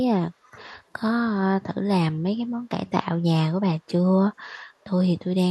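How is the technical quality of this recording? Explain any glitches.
One glitch stands out in the speech: a brief echo leak between 0.43 and 0.59 s. A faint, delayed copy of the talker appears about 445 ms behind the original, roughly 30 dB down. The likely cause is a far-end loudspeaker whose echo canceller let residual pickup return down the line.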